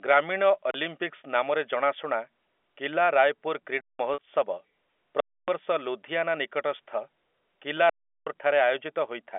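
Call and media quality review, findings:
Underrun with held sample at 0.71, 3.81 to 3.99, 5.20 to 5.48 and 7.90 to 8.27 s. The output buffer runs dry and the converter holds its last value, so the sound freezes flat for about 33, 186, 279 and 372 ms. Roughly 30, 200, 300 and 400 ms of live audio is skipped. The second and fourth gaps fit 8192- and 16384-sample buffers.

Packet loss with pitch repetition at 4.14 to 4.18 s, about 40 ms lost, which points to two packets. The receiver repeats the last pitch period to cover the hole, heard as a brief buzzy hold on the speech over the telephone-band G.711 line.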